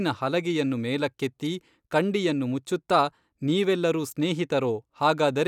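No technical faults occur anywhere in the speech, so there is nothing to place in time order.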